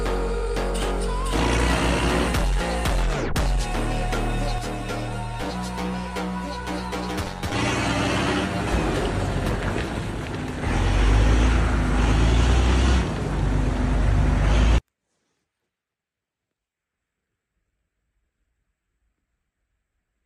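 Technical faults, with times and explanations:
4.58–8.72 s, channel delay (comb filtering): hollow, phasey sound; one channel lags by around 10 ms, so the mono sum cancels at evenly spaced notches from near 50 Hz.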